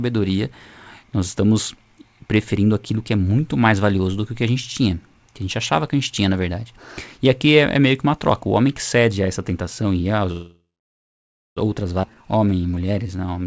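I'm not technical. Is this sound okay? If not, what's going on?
No. Right after "essa tentação e a", from 10.32 to 11.58 s, there's a call audio freeze: the sound trails off into almost a second of silence, likely because packets were delayed, then resumes with nothing lost. At 12.02 to 12.05 s a skip ahead jumps past roughly seven-tenths of a second of speech with no pause, which is the opposite of the freeze. From 12.10 s to the end, a jitter buffer slow-down plays speech at about 84% speed. The pitch stays the same, and the sounds are stretched.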